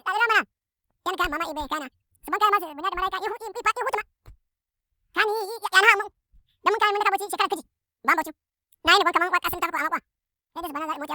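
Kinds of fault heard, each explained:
Audio read two samples at a time (double speed): pairs of samples get taken as one frame, so the whole speech clip runs twice as fast and a full octave (12 semitones) higher, hurried and chipmunk-like.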